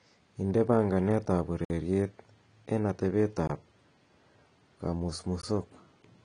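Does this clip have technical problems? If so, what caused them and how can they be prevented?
Yes. The speech sounds dull and swirly, with fizzy sibilants and nothing above 9.9 kHz, likely from AAC compression at a low bitrate, around 32 kbps. Encoding at a higher bitrate, or keeping an uncompressed copy, would prevent this.

The sound drops abruptly to dead silence at 1.65 to 1.70 s (about 53 ms), 3.47 to 3.49 s and 5.41 to 5.43 s (20 ms each). Each is a block of digital silence, most likely where the output buffer went unfilled in time. A larger buffer, or giving the audio process higher priority, would prevent these dropouts.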